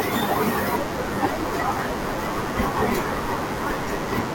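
From start to finish the speech carries a DECT cordless phone buzz: a thin, steady 100 Hz drone full of harmonics, sitting around 20 dB below the voice. A nearby DECT handset or base fires radio bursts every 10 ms, and the audio circuitry rectifies them into sound.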